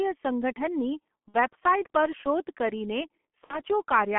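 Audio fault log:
throughout: G.723.1 codec. The speech is squeezed into a phone band of roughly 200 Hz to 3.4 kHz, so it sounds boxed-in and muffled. The heavy hoarse, grainy texture fits the low 6.3 kbit/s G.723.1 mode. With 30 ms frames and a slowly updated vocal model, the codec can't follow fast changes, which smears consonants and makes transitions sound blurry and rough rather than crisp.
1.28–1.38 s and 3.44–3.61 s: VoIP packet loss concealed by the speech codec. In both spots the speech turns into a short smeared stretch. That fits about 60 ms of lost audio, roughly two 30 ms frames each time. The decoder fills the gap by repeating its last pitch and filter and fading the level. Because each frame builds on the previous one, the speech stays weak and distorted a little past the gap.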